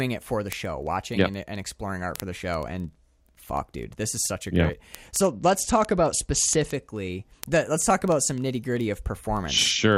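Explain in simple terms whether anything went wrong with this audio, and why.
Two things went wrong. First, word clock ticks run through almost the whole clip, from 0.14 s to 9.97 s. The device receiving this speech over a digital link was running on its own clock instead of following the sender's, and the two were off by roughly 500 parts per million. Each time they slipped past each other, one sample was lost or doubled. You hear that as a sharp tick about every 0.04 s, some two hundred in all.

Second, there is a Bluetooth SBC bit pool drop from 5.20 s to 6.74 s. The wireless link got crowded, so the phone cut the amount of data it spent on each slice of sound, lowering the SBC bit pool from 31 to 10, about a third of what it had been using. To fit, the encoder gave the highest frequencies little or nothing and stored the rest more crudely. For that stretch the speech loses its crisp top end and picks up a gritty, grainy edge until the link recovers.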